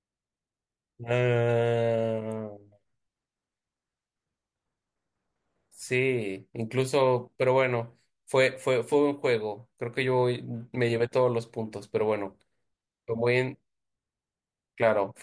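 No technical faults can be heard at any point in the recording, so there is nothing to describe in time order.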